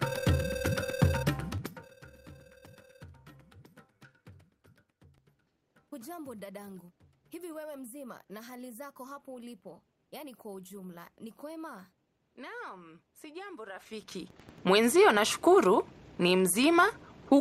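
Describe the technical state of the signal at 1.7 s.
At 1.7 s the level is falling, with zipper noise from 1.49 to 1.95 s. The gain drops in unsmoothed steps of about 5 dB, roughly ten a second. The total cut is around 25 dB. Each step clicks, producing an audible zip.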